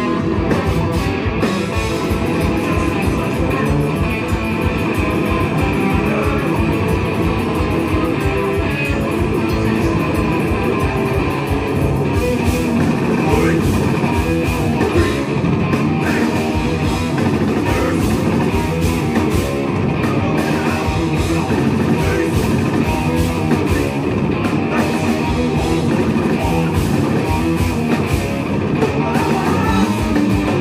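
No technical faults can be heard anywhere in the clip.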